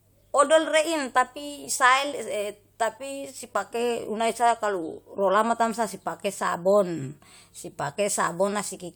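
No technical faults can be heard anywhere in the recording.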